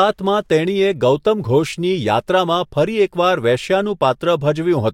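Nothing in this speech recording trips up the ear at any point, so there's no fault to describe here.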